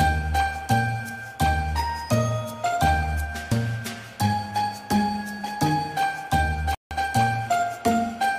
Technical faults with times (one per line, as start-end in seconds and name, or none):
6.75-6.91 Bluetooth stall